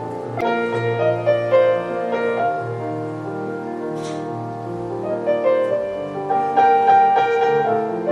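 The whole clip has that watery, swirly quality you get from MP3 compression squeezed too hard: faint detail flickers in and out from frame to frame as the encoder drops weak frequency lines it can't afford, so sharp attacks come out smeared. The damage is plainly audible and fits a low bitrate, somewhere around 64 kbps, which is likely the cause. Right near the start, from about 0.38 to 0.43 s, there's a short glitch. That's damaged data in the compressed stream. Corrupt data made the decoder misread those frames and lose sync, and it searched for the next good frame header.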